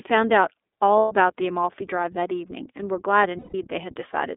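Throughout, the speech sounds narrow, slightly rough and synthetic, confined to roughly 250 Hz to 3.6 kHz: iLBC codec damage, which points to its 13.33 kbps, 30 ms-frame mode. From 0.99 to 1.13 s, and again from 3.38 to 3.55 s, the speech smears into a held, buzzy vowel before snapping back. These are lost iLBC frames, where the decoder repeats the last pitch cycle with noise. The gaps last about 120 ms and 150 ms, which fits four and five dropped frames.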